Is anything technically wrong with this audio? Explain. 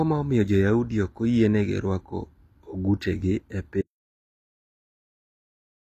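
Yes, there are two faults. Throughout the speech, the treble sounds bright but artificial: sibilants come out gritty and metallic, the codec damage is plainly audible, and nothing is present above 14.9 kHz. This is likely HE-AAC compression at a rate that fits about 24 kbps. The encoder codes only the lower spectrum and fills in the top by copying lower bands upward under a coarse envelope, so the rebuilt harmonics don't line up with the real ones.

At 3.82 s, right after "oyienegi ruako ogutegi e", the sound cuts off abruptly into silence with no room tone, and it stays silent until the end of the clip. This is likely an audio dropout to silence: the input signal was lost, perhaps through a disconnected device, a failed link or an accidental mute, while the recorder kept writing silence. Whatever was said after that point is gone.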